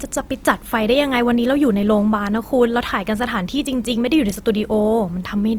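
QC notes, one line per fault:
Throughout, Opus compression: the speech is rough and grainy, with plainly audible damage though the band stays full to about 20.2 kHz. This is likely Opus in CELT mode at a rate near 24 kbps, filling starved bands with folded or noise energy instead of leaving gaps.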